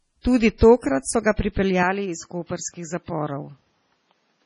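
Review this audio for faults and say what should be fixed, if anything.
Throughout, the speech sounds watery and swirly with nothing above 10.6 kHz, which points to heavy MP3 compression, likely at a low bitrate around 24 kbps.

From 0.58 to 0.61 s, a short hiss of about 31 ms precedes an attack. This is pre-echo: quantisation noise spread across a transform block lands before the onset.

From 1.83 s to the end, the sound turns duller, with nothing above 7.6 kHz, drops about 5 dB in level and carries new background noise far below the signal, with no gap at the change. The cause is likely an input switched to a poorer device.

To prevent these, lock the recording to one full-band microphone and store or send the audio uncompressed or at a much higher bitrate.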